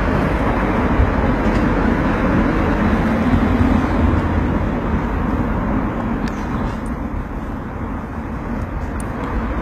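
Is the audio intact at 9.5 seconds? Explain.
No. At 9.5 seconds, as throughout, the audio likely passed through HE-AAC compression at a very low rate, around 20 kbps. Only the lower spectrum was coded and the treble rebuilt from copied bands, so nothing sounds above 14.9 kHz and the highs come across plainly gritty and metallic.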